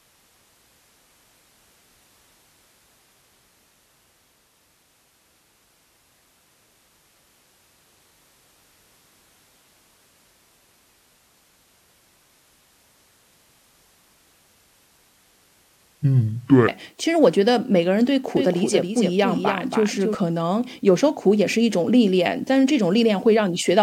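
A section at the wrong speed runs from 0.0 to 16.68 s. The speech plays at 0.625 times its recorded rate, likely because a player or editor clocked it incorrectly, so it sounds slow and drawn out, with pitch dropped roughly seven semitones into a deep register.

A doubled audio track appears from 18.37 to 20.15 s: a second, full-band copy of the speech trails about a third of a second behind and a few dB quieter. This is likely from a slower capture path or misaligned edit, giving a dry, abrupt slapback echo.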